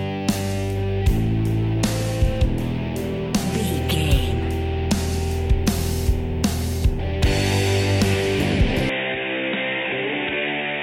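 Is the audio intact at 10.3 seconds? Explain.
No. From 8.89 s to the end, the sound turns dull and boxy, with nothing above 3.8 kHz, a drop of about 5 dB and a faint new noise floor, arriving with no gap. This is likely an input switched to a poorer device.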